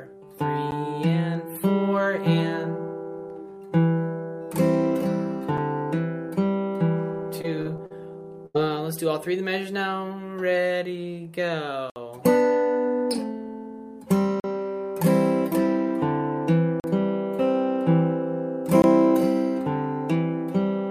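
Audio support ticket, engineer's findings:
Block of digital silence, six hard dropouts: ticks at 0.71 s and 5.58 s, short holes at 11.90–11.96 s (60 ms), 14.40–14.44 s (40 ms), 16.80–16.84 s (40 ms), 18.82–18.84 s (20 ms). Likely output buffer not filled in time, zeros played, no fade.

Repeated packet loss (robotic sound), 7.41–7.92 s: choppy texture. Four gaps, about 120 ms concealed in total (roughly a quarter of the span), longest 45 ms. Jitter buffer or network loss. Concealment extends the last sound into each hole.

Burst of packet loss, 8.46–8.56 s: held, decaying tail, then resumption further on. About 80 ms of audio missing, patched by 82 ms of concealment. Consecutive packets lost or late. Receiver repeated the last sound and faded it before the stream resumed.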